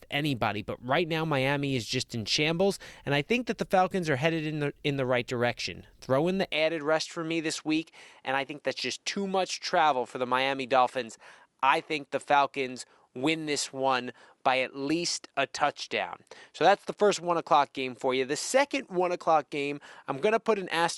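From about 6.53 s, right after "in the", the speech suddenly loses its top end and stays that way to the end. Nothing above 11.4 kHz survives, so it turns a bit duller and boxier. There's no gap at the change and the level hardly moves, but a faint new noise floor comes in, roughly 50 dB down. That pattern points to an input switched to a poorer device, likely a different microphone or a headset profile taking over.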